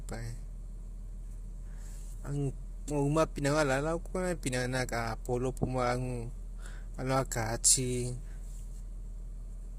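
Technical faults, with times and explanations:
Throughout, low-delay AAC compression: the speech sounds rough and grainy, with noise filling the gaps between harmonics and nothing above 15.7 kHz. That's likely AAC-ELD's short frames smearing pitch detail, and damage this heavy fits a bitrate near 24 kbps.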